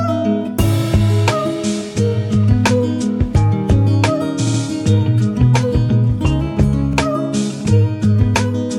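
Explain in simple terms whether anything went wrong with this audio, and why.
Two stutters come from repeated frames, where a short stretch of compressed audio plays again. At 4.46 s a 70 ms block repeats twice more, adding 0.14 s. At 6.92 s a 46 ms block repeats once. Each repeat causes a small skip-like hiccup.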